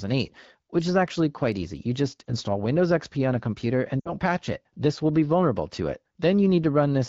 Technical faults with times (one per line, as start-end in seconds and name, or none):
2.27-2.34 lost AMR speech frames
4.00-4.12 lost AMR speech frames